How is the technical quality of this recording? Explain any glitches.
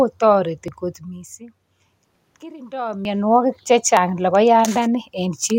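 Four brief skips at 0.68, 2.16, 3.05 and 3.97 s mark the recording. The first comes just before "kot missing".

Each is a jump where the speech skips ahead by about 20 ms with no silent gap, which is what separates it from a dropout. The likely cause is a dropped buffer (overrun): the software did not read the samples before the hardware overwrote them, so the audio on either side is butted together.

The room noise and the level changes near 1 and 2.5 s come from the room and the talker moving, not from these glitches.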